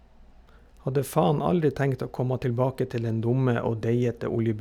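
Speech, with channel delay (comb filtering) from 2.79 s to the end. One channel trails the other by roughly one sample, a few hundredths of a millisecond, so the mono sum cancels near 20 kHz and the top end sounds slightly dulled.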